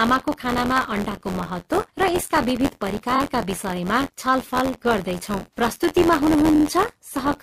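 Speech runs through with buffer tearing: a steady robotic buzz at 86.1 Hz, which fits a 512-sample buffer, present only while there is sound. About 7% of each period carries audio roughly 20 ms stale, hard-joined on both sides. Unlike a stutter, this is continuous rather than located at moments. Repeated frames cause distinct stutters at 3.15–3.19 s, where a 23.2 ms block plays twice more (adding 46.4 ms), and at 6.54–6.63 s, where a 46.4 ms block repeats twice (adding 92.9 ms).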